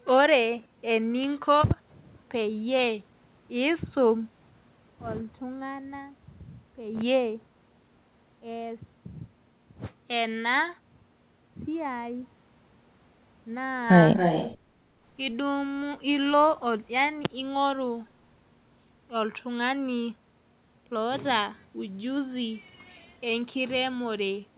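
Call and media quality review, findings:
Echo leak, 14.16–14.57 s: delayed copy of the talker's speech trailing by 272 ms, only about 5 dB under the original. Likely far-end loudspeaker pickup not fully removed by its echo canceller. Unlike room reverb, it's a distinct repeat at a fixed lag, not a smooth decay.

Background gated by the echo canceller, 14.64–14.84 s: room tone dips by about 6 dB, roughly 150 ms in all, then recovers. The canceller is clamping the mic during playback. Unlike packet loss, the bed sound just drops in level and returns, with no clicks, gaps or smeared syllables. Band limit at 4 kHz from G.711 mu-law is expected.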